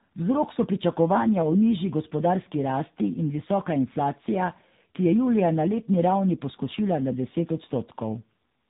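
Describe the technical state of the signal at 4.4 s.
At 4.4 s, as across the whole clip, you're hearing tandem speech coding: two lossy speech codecs in a row, likely ADPCM then low-rate AMR-NB, each re-encoding the other's damage. The speech comes out rough, muffled and warbly, with nothing above 3.8 kHz.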